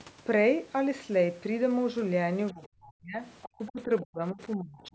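From 2.52 to 3.23 s the talker sinks away, at worst by something like 40 dB. That's speech suppressed in double talk, likely the echo canceller turning everything down because both ends were talking at once. Then, from 3.42 to 3.49 s, there's a quick scrap of the other side's voice leaking through, roughly 20 dB under the talker, likely loudspeaker echo the canceller didn't fully remove. The suppression comes back from 3.57 to 4.4 s with dips of around 35 dB, and again from 4.56 s to the end at around 30 dB, each one probably the canceller clamping down during overlapping talk. The call's microphone processing caps the sound at 8 kHz, which is expected.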